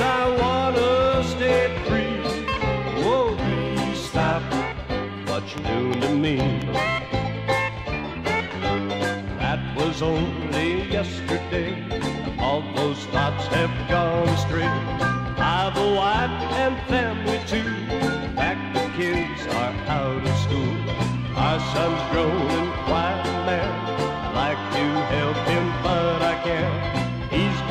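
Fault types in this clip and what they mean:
Train of clicks: a short burst of near-identical impulsive clicks laid over the sound, here about four of them between 5.58 and 6.63 s, arriving unevenly at an average of roughly 2.9 per second. They peak well above the programme, around 10 dB over it, so each one reads as a distinct tick or pop. The repeated same-shaped pulses point to an external injection, likely electrical interference or a faulty connection or power supply.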